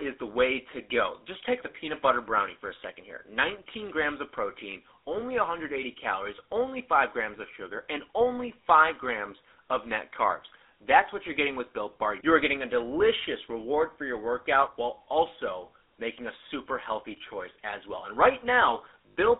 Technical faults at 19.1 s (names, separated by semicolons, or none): GSM full-rate codec; lost GSM frames